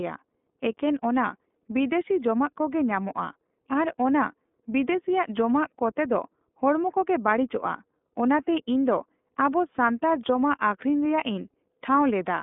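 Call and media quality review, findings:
iLBC codec, full clip: plainly audible roughness, slightly synthetic speech. Spectrogram shows an empty band above 3.7 kHz, energy confined to roughly 200 Hz to 3.5 kHz. Frame-by-frame independent excitation coding, consistent with 30 ms frames at 13.33 kbps.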